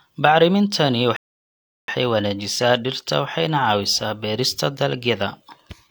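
A rebuffering stall at 1.16 to 1.88 s cuts this speech to silence. Playback ran dry of downloaded audio, then resumed exactly where it stopped, adding 0.72 s.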